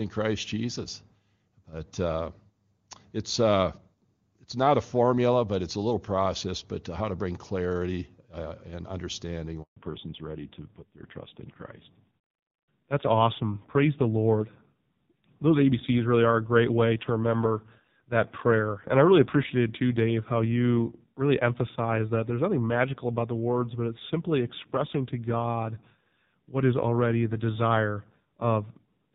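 At 9.62 s, just after "clarity uh and understanding", the call was handed from one network link to another, and for the 140 ms of the switch no speech frames got through. This handover gap sounds like the voice collapsing almost at once into dead silence, then resuming at 9.76 s, with whatever was said in between simply missing rather than muffled or garbled.

When the new link comes up, the call has undergone a fallback to narrowband. Before the gap the speech carries the open, airy top end of HD Voice, consistent with AMR wideband at a high rate, with little or no audible coding damage. From 9.76 s to the end, nothing above 4 kHz survives, so sibilants lose their edge and the voice turns boxy and dull. A rough, raspy grain also appears, which points to a low-rate narrowband codec, around 5.9 kbit/s.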